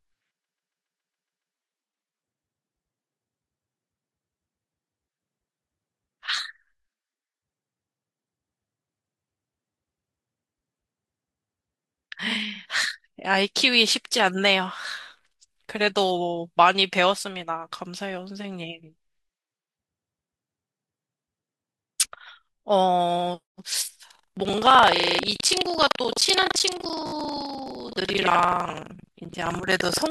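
From 0.43 to 1.55 s the speech stutters: a block of about 139 ms is played eight extra times, adding 1.11 s. This is repeated frames, where a run of compressed frames was delivered more than once and the decoder simply played it again.

At 24.07 s buffer tearing begins and continues to the end of the clip. The writer and the hardware reader of the output ring buffer have drifted until they cross inside every period. About a fifth of each buffer therefore holds audio from roughly a tenth of a second earlier, with hard edges on both sides. The result is a rattling 23.4 Hz buzz under the speech, which fits a 2048-sample buffer.

Within the tearing, repeated frames return twice. From 24.96 to 25.19 s a 37.7 ms block plays six extra times, adding 0.23 s. At 27.07 to 27.12 s a 17.4 ms block repeats three extra times, adding 52 ms. Both are heard as short stutters on top of the buzz.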